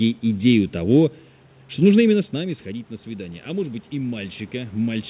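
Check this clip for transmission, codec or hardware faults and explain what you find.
One fault stands out: automatic gain rising. From 2.3 s, just after "что нужно именно с", to the end, the gain control slowly boosts voice and room noise together. It is compensating for an input drop of about 13 dB after the talker moved back around 2.0 s. On the waveform the envelope and noise floor swell steadily, and a spectrogram shows the background brightening.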